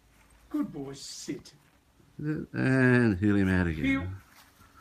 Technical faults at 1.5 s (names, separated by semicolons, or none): call bitrate drop